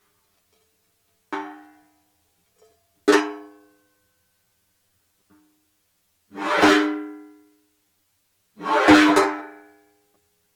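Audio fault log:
Throughout: channel delay (comb filtering). One channel runs late by roughly 10 ms before the two are summed to mono. Content shared by both channels cancels at evenly spaced frequencies. The first notch sits near 50 Hz, and further notches follow about every 100 Hz above it. This carves a regular pattern through the spectrum. The sound comes across hollow and phasey. The notches stay fixed for the whole clip.
1.58 to 1.66 s: loose connector crackle. A short, irregular burst of scratchy crackle lasts about 80 ms. It fits a worn or dirty contact that briefly makes and breaks as it shifts. Each break chops the signal. The rapid, uneven train of these interruptions is heard as crackle rather than a single clean dropout.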